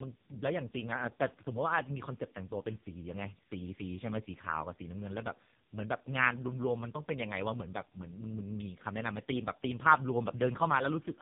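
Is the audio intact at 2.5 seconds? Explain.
No. At 2.5 s, as throughout, the speech shows tandem speech coding. The roughness and warble point to two speech codecs in a row, likely GSM full rate then AMR-NB near 5.9 kbit/s, each recoding the other's damage. A spectrogram shows nothing above 3.7 kHz and smeared harmonics.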